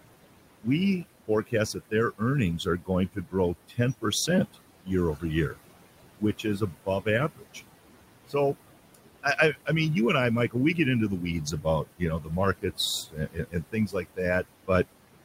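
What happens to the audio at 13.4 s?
At 13.4 s the audio falls inside a span of speech cut by the noise suppressor, running from 11.46 s to 14.69 s, right after "we get into the". The suppressor misjudged parts of the speech as steady noise and pulled those bands down along with the background, by about 19 dB at the deepest point. Roughly a second of material across that span is affected, so soft consonants and word endings come out swallowed or faint.

The same moment also carries the noise suppressor artifacts that run through the whole clip. The processor reduces bands it classifies as stationary noise by about 18 dB, frame by frame. The room noise, which sits about 14 dB below the speech, therefore dips in the gaps and resurfaces under the speech.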